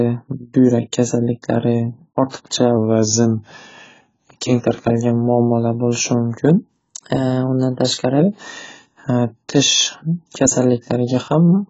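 Heavy AAC compression runs through the whole speech clip, likely AAC-LC at a bitrate around 16 kbps. It sounds dull and smeared, and the spectrogram shows nothing above 7.6 kHz. From 2.77 to 4.25 s, just before "keng tarqalgan muammolar", a likely drift correction step slows playback by 6.3% and lowers pitch by about 113 cents. The harmonics step down, then snap back. From 6.74 to 8.20 s a second likely step speeds playback by 6.3%, raising pitch about 106 cents, and the harmonic lines jump upward for that stretch.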